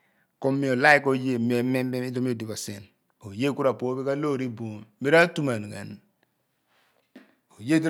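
Nothing stood out as a technical fault when listening to this speech recording.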